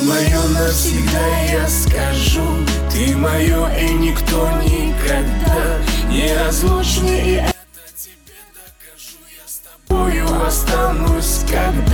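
The audio drops by about 22 dB and turns faint from 7.51 to 9.91 s, then recovers. The likely cause is one channel inverted: with one side's polarity flipped, everything common to both channels cancels when they're summed, leaving only their faint difference.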